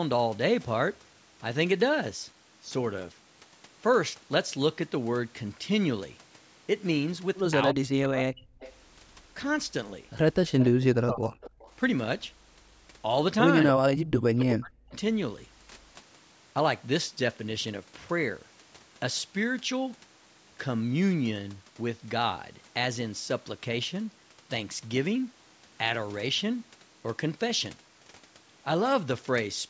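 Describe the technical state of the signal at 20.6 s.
At 20.6 s the speech is intact, with no fault present, only the normal band limit of call microphone processing, which leaves nothing above 8 kHz.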